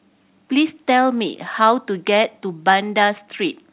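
No faults can be heard in this speech clip. It has come through a WebRTC call path, and nothing above 4 kHz is present, which fits a narrowband G.711 A-law telephone codec at 64 kbps.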